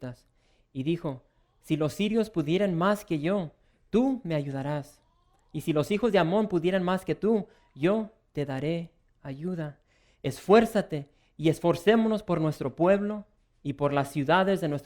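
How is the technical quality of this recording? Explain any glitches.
No glitches or faults are audible.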